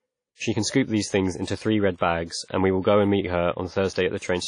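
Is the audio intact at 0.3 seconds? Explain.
No. The audio at 0.3 s carries damage that runs through the whole clip, likely from WMA compression at a low bitrate, around 32 kbps. Its long transform blocks smear quantisation noise across tens of milliseconds and strip everything above 10.1 kHz, so the speech sounds dull, ringing and washy, with hiss that breathes along with it.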